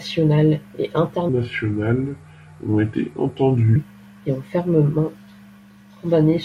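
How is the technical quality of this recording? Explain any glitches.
The recording has one clear glitch: a section of the speech plays at the wrong speed. From 1.29 to 3.76 s, just before "et ont fermement", the audio runs at 0.763 times its proper rate, likely because that stretch was played or resampled against the wrong clock. The voice drops about five semitones and drags noticeably, then snaps back. Tempo and pitch fall together, which sets it apart from a pitch-shift fault, where the timing would stay normal.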